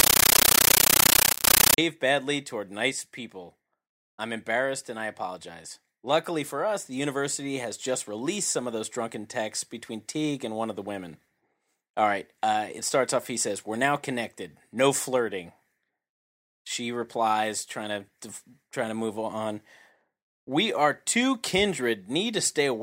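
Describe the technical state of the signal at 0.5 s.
Compressed stream played as audio, from 0.0 to 1.78 s: an undecoded Dolby Digital (AC-3) stream is being treated as plain samples, so each frame becomes a 13.3 ms noise burst then silence, 31.25 times a second, heard as very loud chattering static.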